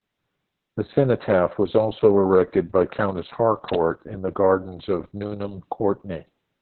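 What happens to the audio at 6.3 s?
At 6.3 s the speech is still under the heavy Opus voice compression that runs through the whole clip: the coder, likely at about 6 kbps in narrowband SILK mode, keeps nothing above 4.2 kHz and codes the excitation coarsely, so the voice sounds muffled, hoarse and faintly robotic.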